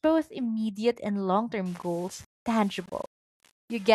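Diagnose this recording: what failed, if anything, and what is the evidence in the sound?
From 1.66 s, right after "immediate and long", to the end of the clip, the speech turns grainy, with a gritty distortion that follows the voice and swells and shrinks with it. Quiet syllables and decays sputter or fall to silence. This is low bit depth without dither, likely from a sample-format conversion that rounded the signal with no dither. The error sits roughly 30 dB below the speech, which fits about 7 bits.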